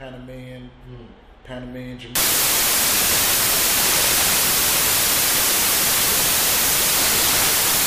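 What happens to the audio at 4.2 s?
Samples built from the wrong bytes, from 2.15 s to the end of the clip, cover that moment. Each sample's bytes are assembled in the wrong order or alignment, so the rapidly changing low bits dominate. The result is loud, harsh broadband noise, close to white on loud passages.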